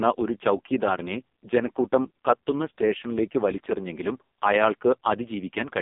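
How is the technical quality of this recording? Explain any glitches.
Pretty rough, honestly. The whole thing sounds like it went through an AMR narrowband mobile codec, and a heavily squeezed one. From start to finish the speech sits in a telephone band of about 200 Hz to 3.5 kHz, with nothing above 3.5 kHz. AMR-NB rebuilds the voice from a vocal-tract model excited by a few pulses per subframe. At this damage level the buzzy, synthetic texture fits the lowest 4.75 kbps mode, so sibilants go dull and the voice sounds thin and robotic.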